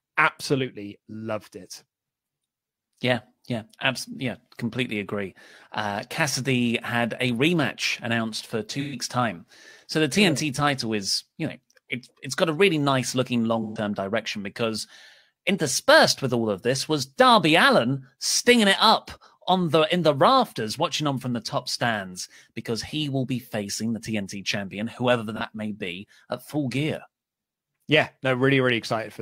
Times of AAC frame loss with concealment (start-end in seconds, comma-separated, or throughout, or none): 8.80-8.95, 13.62-13.77, 25.36-25.41